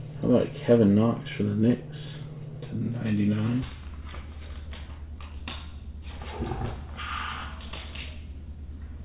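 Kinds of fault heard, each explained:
Wrong sample rate: from 3.63 s to the end, the sound plays at half speed and drops a full octave, 12 semitones. The samples are clocked out at half the rate they were captured at, with no conversion, which fits 16 kHz material being played back at 8 kHz. On a spectrogram, every component shifts down to half its frequency while each event stretches to twice its duration. The waveform looks drawn out horizontally by a factor of two.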